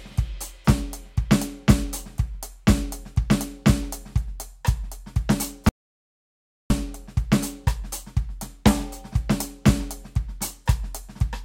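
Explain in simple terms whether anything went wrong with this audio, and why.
The music stops dead from 5.69 to 6.70 s, about a second of total silence. This audio dropout to silence likely came from a lost input, since even background hiss vanishes, unlike a quiet passage.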